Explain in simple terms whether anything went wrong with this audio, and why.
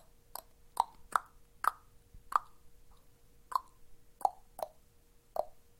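At 2.9 seconds the sound jumps ahead, losing about a third of a second. These are compressed frames skipped: roughly fifteen chunks of about 21 ms each were missing or rejected as damaged, so playback leapt past them.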